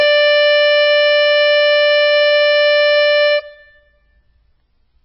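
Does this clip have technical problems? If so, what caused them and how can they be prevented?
Yes. Throughout the music, the sound is dull and watery, with a swirling, metallic smear and blurred attacks. Nothing is heard above 5.6 kHz. The likely cause is heavy MP3 compression at a very low bitrate, around 16 kbps, which cut the treble and zeroed weak frequency lines that flicker between frames. Encoding at a much higher bitrate would prevent it.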